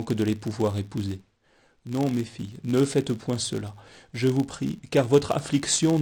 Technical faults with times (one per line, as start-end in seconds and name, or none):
0.00-6.01 filter restarted on every block